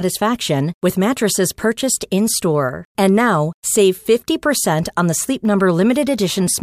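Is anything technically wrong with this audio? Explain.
No, nothing technically wrong stands out anywhere in this speech recording.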